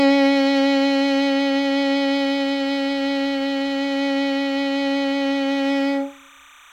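A piece of music carries timecode bleed from 0.33 s through to the end at 6.73 s: a thin, steady chirping warble sitting roughly 30 dB below the music. Linear timecode from an adjacent track or cable has leaked in, its square wave flipping between tones near 1 kHz and 2 kHz at a 29.97 frames-per-second rate. A spectrogram would show two persistent horizontal bands around 1 and 2 kHz with rapid alternating texture, plus odd harmonics above.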